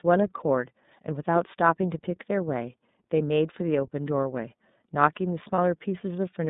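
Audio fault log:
throughout, iLBC codec: The audio is confined to a narrowband telephone channel of roughly 150 Hz to 3.7 kHz, with nothing above it. The coding damage is plainly audible as a rough, slightly synthetic texture on the speech. iLBC codes each frame's excitation on its own, so small errors in the excitation model come through directly. The character fits the 13.33 kbps mode with 30 ms frames.
5.54 to 5.58 s, lost iLBC frames: A short, held, faintly buzzy vowel-like sound replaces the speech for about 30 ms, which points to a single lost frame. The decoder concealed the gap by repeating the last pitch cycle blended with noise. Because iLBC frames are independent of one another, the speech is correct again immediately after the concealed frame and no smearing carries into the following audio.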